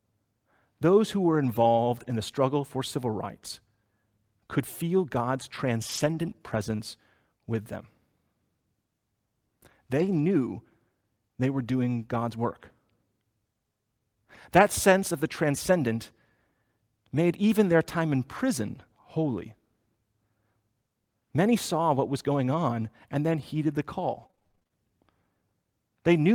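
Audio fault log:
5.89–6.31 s, 6.79 s and 10.05–10.23 s, lost packet rebuilt from error correction: runs of packets went missing, but each following packet carried a low-bitrate spare copy, and the decoder played those copies instead. That covers about 220 ms in the first run, one 20 ms slice at 6.79 s, and 100 ms at 10.05 s, which fits 20 ms packets. Nothing drops out, but those stretches turn coarser and grainier than the surrounding speech.
6.75–6.81 s, short concealed packet loss: about 40 ms of audio arrived too late to be decoded, and the receiver invented roughly 33 ms to bridge the hole. It extended the preceding sound, following its pitch where it was voiced and using shaped noise where it was not, then crossfaded back into the real signal. This is heard as a brief smear or wobble that runs straight into the rebuilt slice at 6.79 s.
24.07–24.72 s, repeated packet loss (robotic sound): packets dropped again and again, leaving eleven holes, the longest about 25 ms, with around 220 ms missing in total. 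Roughly 226 ms was patched by stretching the last sound, about a third of the stretch, and around a tenth of a second came from spare copies. Each patch is followed closely by the next, so the speech sounds choppy, with fragments missing.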